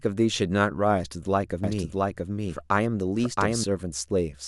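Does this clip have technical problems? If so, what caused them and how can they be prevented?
Yes. The most likely cause is the speech being captured a second time through a slower path, or an edit leaving two copies out of step, so the same audio is mixed in twice. From 1.64 s to 3.64 s this doubled audio track puts a second full-band copy roughly 0.7 s behind the original, at about the same loudness, with no decay or room colour. It appears and disappears abruptly at those edges. To prevent it, route each source through a single capture path and check edits for overlapping duplicate regions.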